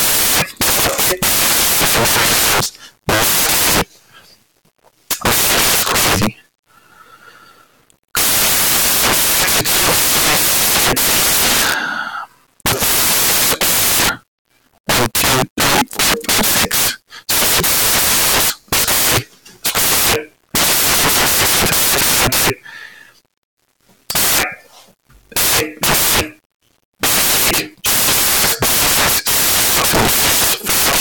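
From start to finish the samples are built from the wrong bytes, so jittery low bits dominate and the speech turns into loud, harsh noise, close to white.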